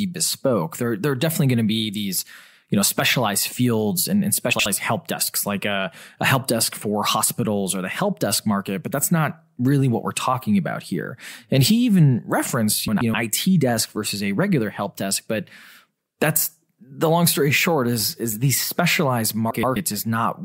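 At 4.53–4.66 s, 12.88–13.14 s and 19.51–19.76 s the speech flutters: frames out of order, two neighbouring blocks (about 64 ms, then 128 ms) decoded swapped. Unlike a skip or dropout, nothing is lost and the timing stays intact.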